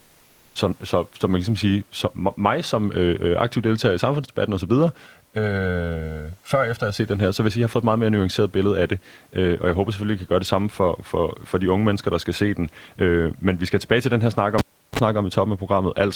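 A speech recording with two separate faults. From 5.06 to 6.99 s, between "deltager i samfundsdebatten osv" and "den her så vil", one channel runs late by roughly a millisecond and a half and the two are summed to mono, which is channel delay (comb filtering). Everything common to both channels cancels at evenly spaced frequencies, the first notch falling somewhere around 300 Hz, so the voice turns hollow and phasey for those two seconds. At 14.58 s, right after "til den her snak", the cable is pulled and plugged back in. A pop cuts the signal to near silence for about 356 ms. A 38 ms burst of 50 Hz mains buzz follows as only the plug tip makes contact, and a second pop brings the sound back at 14.99 s. Room noise stays about 40 dB below the speech in the background.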